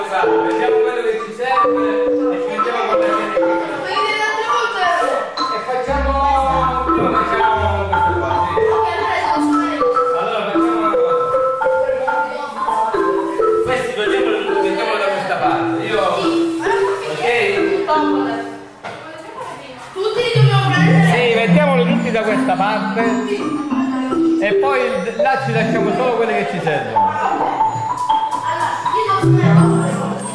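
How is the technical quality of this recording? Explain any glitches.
Nothing to explain here, since there are no glitches anywhere in the recording.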